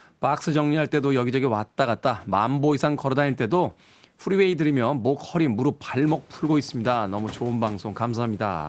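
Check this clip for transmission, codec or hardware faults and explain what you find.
Nothing wrong turns up here; it's ordinary call speech with the top end stopping at about 8 kHz and some room noise that picks up by about 12 dB around 6 seconds in while staying well under the voice, and that's just the call path and the room doing their usual thing.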